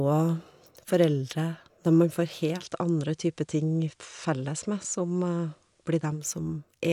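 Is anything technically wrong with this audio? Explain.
Yes. From 2.54 to 6.27 s, digital radio blending to FM analogue: a 139 ms cross-fade brings faint hiss, level about 1 dB down, unlike an abrupt dropout.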